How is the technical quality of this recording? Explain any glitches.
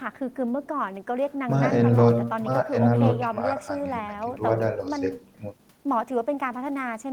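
No glitches: the speech runs without dropouts, clicks, distortion or other transmission faults.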